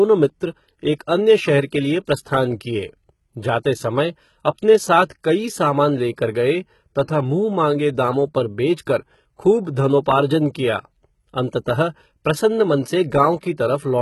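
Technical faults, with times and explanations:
Throughout, HE-AAC compression: the treble sounds rebuilt rather than captured, with sibilants turning gritty and lispy and nothing above about 11.8 kHz. The likely cause is HE-AAC v2 at a low bitrate, around 16 kbps, copying lower bands upward under a coarse envelope, so upper harmonics fail to line up.
3.63 s, pre-echo: a brief hiss of about 15 ms arrives just ahead of a sharp attack, which itself sounds softened and smeared. The codec spread its quantisation noise across the whole transform block, so noise sized for the loud onset leaked into the quiet moment before it.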